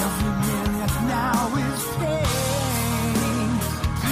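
No technical fault can be heard anywhere in the audio, and the signal stays steady and intact throughout.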